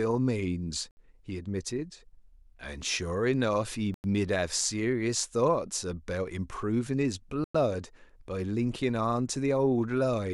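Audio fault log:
0.91–0.97 s, 3.94–4.04 s, 7.44–7.55 s, Bluetooth stall: speech cuts to silence for 61, 98 and 104 ms, then resumes, likely from the headphone buffer running dry while lost packets were resent.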